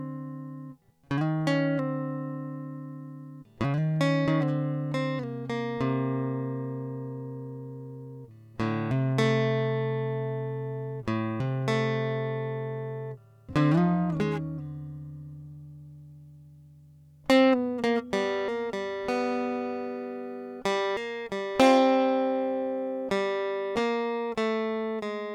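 Nothing goes wrong anywhere in this stretch of music; there's no technical fault to point to at any moment.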